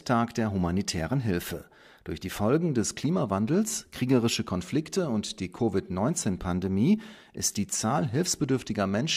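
No technical faults can be heard anywhere in the speech recording; there are no interruptions or disturbances.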